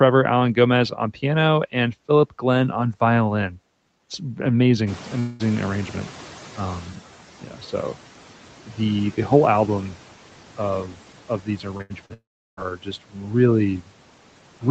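At 4.86 s the room noise jumps by about 17 dB. The noise suppressor is catching up. The louder noise comes through at first. It then sinks by about 10 dB over 2.1 s, settling by 6.97 s.

From 5.19 to 5.42 s the sound smears into a fading buzz or hiss for about 0.2 s. Playback then resumes with that stretch gone. A long network dropout is the likely cause.

Speech is cut by the noise suppressor twice. At 7.42 to 7.62 s it dips by up to about 8 dB. From 10.57 to 13.18 s, several moments adding up to roughly 0.7 s drop by up to about 12 dB. The affected speech sounds swallowed or faint.

Short concealed packet loss hits at 11.78 to 11.82 s and 12.06 to 12.12 s. These 20 ms and 40 ms holes are filled by continuing the last sound. Each is heard as a brief smear.

Between them, from 11.82 to 11.92 s, a burst of packet loss removes 80 ms. The receiver stretches the last sound into a fading buzz or hiss before the audio jumps ahead.

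At 12.14 s the sound trails off briefly. Silence follows for about 0.36 s, and the audio returns at 12.59 s with 0.44 s missing. The likely cause is a long network dropout.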